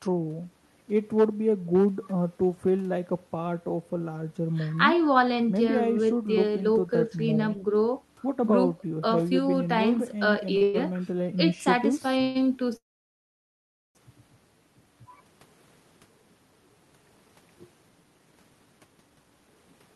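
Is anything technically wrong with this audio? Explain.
Yes. The speech has been stretched and then hurried by late packet delivery, with the band stopping near 12 kHz from the call codec.

At 10.57 to 10.63 s, a short stall from a late packet holds the last sound about 35 ms while the jitter buffer sits empty. On a spectrogram it shows as smeared, repeated harmonics.

Call audio freezes follow at 10.63 to 10.76 s (110 ms), 12.22 to 12.37 s (130 ms) and 12.77 to 13.97 s. They are likely caused by delayed packets. Each fades into a buzzy hold. The last falls to near-silence for about 1.15 s, a flat gap in the waveform.

From 17.10 s to the end, a jitter buffer speed-up plays speech at 112% speed, dropping roughly 0.4 s in pitch-period pieces. Pitch is unchanged, but the spectrogram shows compressed syllable spacing.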